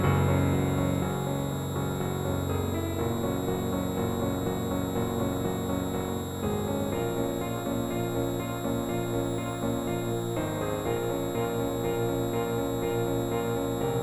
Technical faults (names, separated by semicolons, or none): switching supply whistle; overlap-add ripple